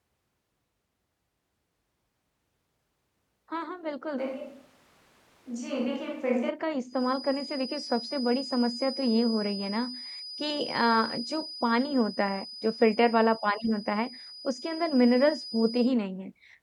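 From 4.20 s to 6.49 s the speech suddenly goes roomy and hollow, loses its low end, drops about 5 dB, and picks up background noise sitting roughly 30 dB under the speech. That's a switch to a distant microphone: the close mic's feed most likely dropped out and a far-off one, something like a camera mic, covered the gap. Both the change over and the return are abrupt.

Shortly after, from 6.86 s to 15.96 s, a thin, steady feedback whistle at 5 kHz runs behind the speech, around 15 dB below it and swelling and fading slowly in level. The likely cause is the loudspeaker-to-microphone loop sitting right on the edge of feedback, so that single frequency keeps ringing without ever running away into a full howl.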